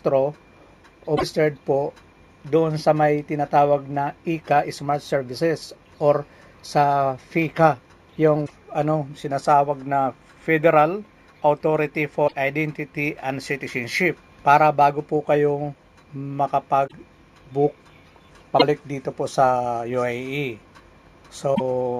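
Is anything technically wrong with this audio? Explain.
Yes. At 1.16, 8.45, 12.27, 16.86, 18.59 and 21.54 s, the likely cause is a broken MP3 bit reservoir: frames dropped out, so the following 26.1 ms frames read borrowed data from the wrong bytes. The audio skips ahead with a garbled glitch of about 70 ms, only 30 ms at 18.59 s.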